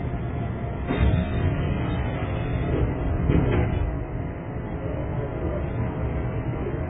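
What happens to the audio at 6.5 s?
At 6.5 s you're hearing transcoding between lossy codecs, and it runs through the whole clip, not just that moment. Nothing comes through above about 3.7 kHz, so everything sounds dull and boxed-in. Over that you get smeared, watery swirling layered with gritty, warbling artefacts. The likely cause is a very low-rate AAC pass re-encoded to Vorbis: the second codec wastes bits on the first one's damage and piles its own on top, and the narrow bandwidth from the first pass carries through.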